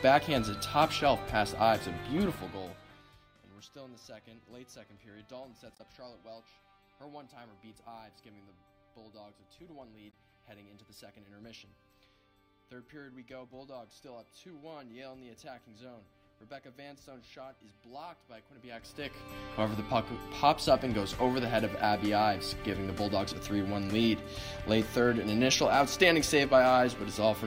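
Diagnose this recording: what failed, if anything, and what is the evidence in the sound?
Damaged data in a compressed stream, at 5.75 to 5.80 s and again at 10.10 to 10.14 s, each heard as a brief chirp or blip. At the codec stage, corrupted bytes made the decoder misread those frames and lose sync until it found the next valid frame header.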